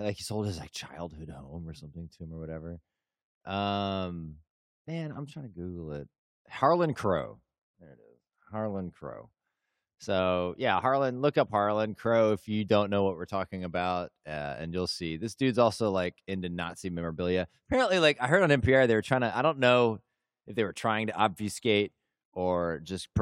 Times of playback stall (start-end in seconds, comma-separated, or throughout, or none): none